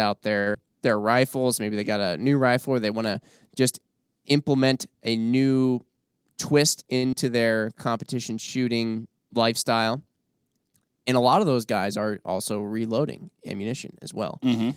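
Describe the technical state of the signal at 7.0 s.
A short stall from a late packet occurs between 6.97 and 7.05 s. The last sound is stretched for about 55 ms, then resumes. Nothing is lost.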